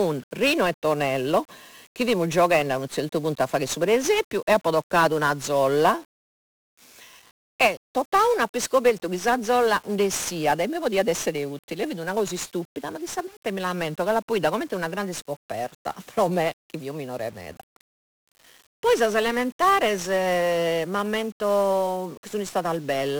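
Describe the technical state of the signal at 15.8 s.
At 15.8 s the speech is fuzzy and crackly, its treble buried in hiss: 1-bit DFPWM compression, running throughout, steers each sample with a single bit, leaving heavy broadband quantisation noise.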